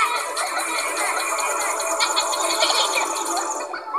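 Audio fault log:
0.69–2.97 s: doubled audio track. A second, full-band copy of the sound trails the original by roughly 0.7 s at about 5 dB lower, likely from a slower duplicate capture path. It starts and stops abruptly, without decay, so spectrogram patterns repeat shifted right and waveform envelopes overlap.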